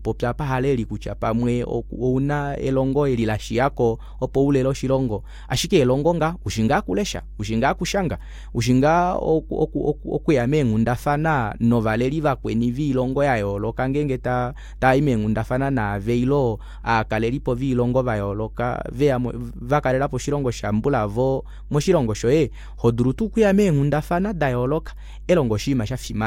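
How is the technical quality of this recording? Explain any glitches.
A steady low drone sits under the speech from start to finish, and it is the recording's one clear fault. This is mains hum: a constant 50 Hz tone with some low harmonics above it, loud enough to stay audible through pauses and under the speech, roughly 15 dB below it. It comes from the power line leaking into the signal path, most commonly through a ground loop between connected equipment or from a transformer placed close to the cabling or microphone.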